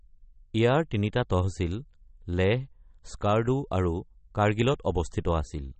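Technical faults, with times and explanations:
Throughout: MP3 compression, likely at a low bitrate around 32 kbps. Nothing sounds above 8.4 kHz, and the speech has a watery, swirling quality as weak frequency lines drop in and out between frames. That swirl is what sets it apart from a plain low-pass filter.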